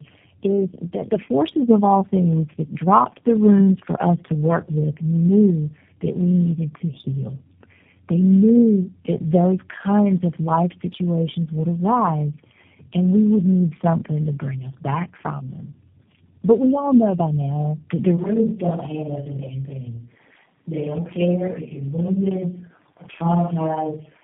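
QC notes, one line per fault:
Throughout: tandem speech coding. The speech passes through G.729A three times, with a G.711 mu-law stage between each, so every coder re-encodes the previous one's damage. Unlike a single low-rate codec, the roughness and warble compound, and nothing sounds above 3.7 kHz.
18.18 s to end: switch to a distant microphone. The speech suddenly turns roomy and hollow, thinner in the bass, and about 5 dB quieter, with room noise around 35 dB below it. The likely cause is the close microphone dropping out. A gradual fade would not give this abrupt step.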